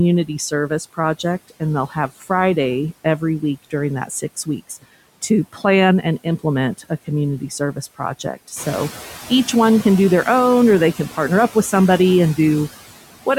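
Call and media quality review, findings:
Noise suppressor artifacts, throughout: background pulled down by about 16 dB, noise floor pumping between phrases and swelling back under the speech. Suppressor gating steady-noise bands frame by frame, so the floor follows speech activity instead of staying put.

Speech cut by the noise suppressor, 1.9–2.23 s: soft sound ducked by up to about 10 dB, roughly a tenth of a second affected. Sounds swallowed. Suppressor misread low-level speech as noise and attenuated it with the background.

Same issue, 5.53–5.62 s: brief dip of up to about 11 dB, again around a tenth of a second touched. Speech goes faint. Same cause, the suppressor's speech/noise decision flipping on quiet speech energy.

Noise suppressor catching up, 8.56–8.89 s: room noise steps up about 10 dB around 8.5 s, ending roughly 14 dB below speech. It leaks through under-reduced at first, then settles over about 330 ms to about 7 dB of cut. 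The noise estimate lags the jump and only pulls the level down once it adapts.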